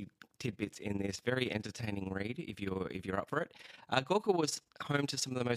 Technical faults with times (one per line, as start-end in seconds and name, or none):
0.00-5.56 overlap-add ripple